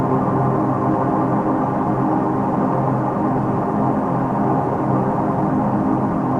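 No technical faults are audible anywhere in the clip.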